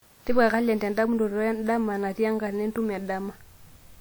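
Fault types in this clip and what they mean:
Generation loss: the speech has a swirly, smeared and hollow character that is heavier than a single lossy encode would give, with consonant attacks blurred across the whole clip. The likely cause is repeated decoding and re-encoding, around five passes, each quantising on a shifted frame grid so that noise and spectral holes accumulate. The texture fits a WMA chain at about 96 kbit/s. Content extends up to 20.1 kHz, so the damage is not simple band-limiting.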